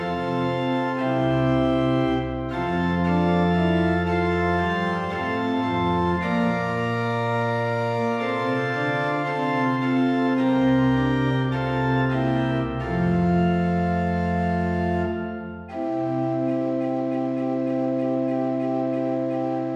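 No technical faults can be heard anywhere here.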